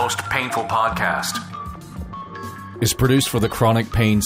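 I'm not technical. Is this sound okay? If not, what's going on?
No. At about 3.43 s there's a brief watery blip over the sound. That's DAB burbling: weak digital radio reception let a few data errors slip past the error correction, so some frequency bands got short blips of noise.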